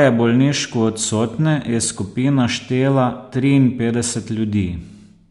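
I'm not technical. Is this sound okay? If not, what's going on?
Yes, no faults heard.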